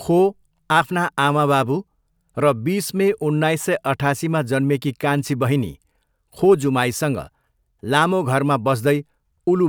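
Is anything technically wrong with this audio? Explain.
No, nothing technically wrong stood out on listening to this speech recording.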